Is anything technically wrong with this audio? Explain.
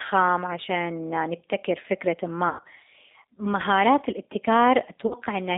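Yes. G.729 codec damage runs through the whole clip. The speech sits in a narrow line band of about 300 Hz to 3.7 kHz, and the roughness and slightly synthetic texture fit an 8 kbit/s coder. That coder rebuilds each 10 ms frame from a vocal tract filter, a pitch predictor and a handful of pulses, so the fine detail of the real waveform never survives. The result is plainly audible as a rough, synthetic edge on the speech.

VoIP packet loss concealed by the speech codec happens twice. The first gap is from 2.49 to 2.68 s, about 140 ms of missing audio scattered over 160 ms, with the longest unbroken run lasting 100 ms. The second is from 5.07 to 5.15 s, about 40 ms lost. In both places the decoder extrapolates from its last pitch and filter settings, turning the speech into a stretched, buzzy tone or coloured noise that fades. The speech stays weak or distorted briefly after the stream resumes.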